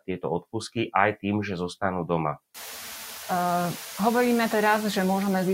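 Noise suppressor artifacts run through the whole clip. The suppressor pulls only about 2 dB off what it reads as steady noise, so the room noise jumping about 22 dB around two and a half seconds in, to about 16 dB under the speech, comes through nearly untouched.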